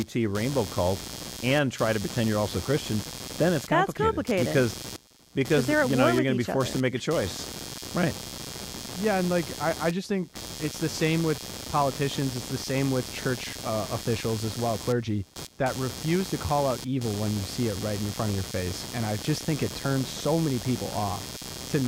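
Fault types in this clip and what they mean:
Computer activity noise: A buzzing, chirping scratch runs under the speech for the whole clip, pulsing roughly 150 times a second and sitting only around 10 dB below the speech. It comes from processor or graphics load shifting the audio circuit's shared ground.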